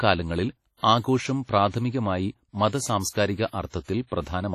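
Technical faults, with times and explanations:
Throughout, WMA compression: the speech has a ringing, washy quality, with a hiss that swells and fades along with the voice, and nothing is left above about 14.7 kHz. The damage is heavy and points to a likely low-bitrate WMA encode around 32 kbps, where long transform blocks smear quantisation noise across tens of milliseconds around each sound and weaker spectral components are discarded outright, leaving the top end empty and the texture watery.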